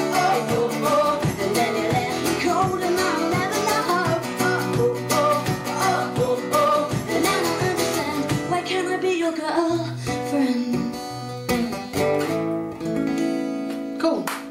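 No technical faults can be heard anywhere in the audio; the signal stays steady and intact throughout.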